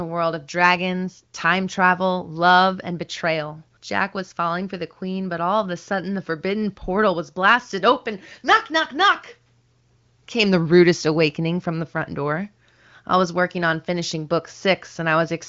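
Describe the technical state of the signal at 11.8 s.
At 11.8 s the speech is intact, carried through the AMR wideband (HD Voice) codec at 23.05 kbit/s with no fault there and at most faint coding damage.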